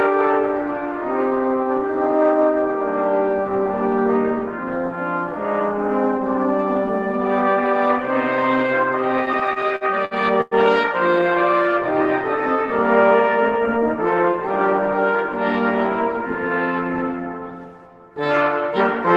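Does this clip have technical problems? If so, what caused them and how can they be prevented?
Yes. Between 9.25 and 10.54 s there are repeated stalls (stutter), with ten short gaps, the longest about 103 ms. Packets arrived late, the jitter buffer kept running dry, and the receiver stretched the last sound to fill each gap. A steadier network and a deeper jitter buffer would prevent it.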